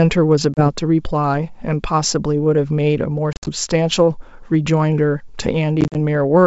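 Packet loss on an ADPCM call cuts hard silent holes at 0.54–0.69 s (30 ms lost), 3.33–3.49 s (110 ms scattered, longest 60 ms) and 5.81–5.96 s (70 ms, longest 40 ms). The decoder's predictor and step size drift, so speech returns slightly distorted briefly.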